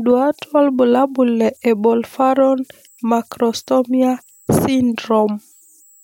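Throughout the speech, a faint whistle sits around 7 kHz, about 38 dB below the signal. These are converter idle tones. An undithered delta-sigma converter, handed small input levels, settles into repeating bit patterns, and those cycles produce a steady tone whose pitch follows the input's offset. It is most audible in pauses, with grainy noise beneath quieter passages. A spectrogram shows a thin horizontal line near 7 kHz, persisting between phrases.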